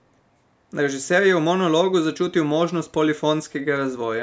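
Nothing here sounds wrong: the speech has simply been through a call's microphone processing, which trims the deepest bass and leaves nothing above 8 kHz, and that's just how such a path normally sounds.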